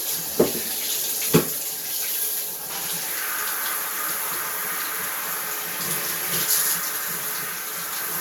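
Throughout the recording the sound has a swirly, smeared quality, with a hollow character and transients that land soft and blurred rather than crisp. The top of the spectrum stops at about 20.1 kHz, which fits a 128 kbit/s MP3 chain. This is likely generation loss: the audio appears to have been encoded about three times, each pass requantising on a shifted frame grid so the noise and spectral gaps stack up.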